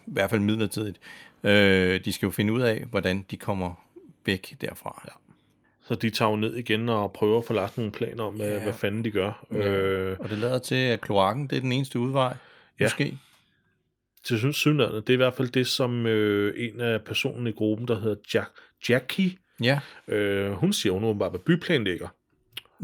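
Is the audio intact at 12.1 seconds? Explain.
Yes, at 12.1 seconds the speech runs intact, with no dropout, click, distortion or other audible fault at that point.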